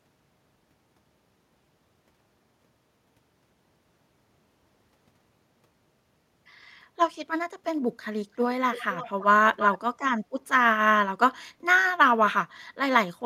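Echo leak at 8.72–9.25 s and 9.54–9.78 s: speech repeats 333 ms late, faint then nearly as loud, likely a loudspeaker echo canceller passing its microphone pickup.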